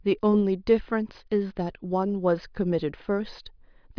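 Nothing in this speech recording stood out as a technical problem on listening.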